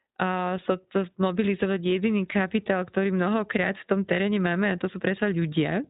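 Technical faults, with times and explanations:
Throughout, iLBC codec: the speech is band-limited to nothing above 4 kHz and has a plainly rough, slightly synthetic edge, because each short frame's excitation is coded independently. The texture points to 20 ms frames, which fits the 15.2 kbps mode.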